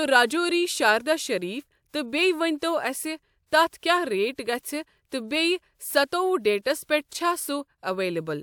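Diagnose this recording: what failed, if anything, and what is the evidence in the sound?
Nothing failed, and there is no fault evidence anywhere in the sound of this speech recording.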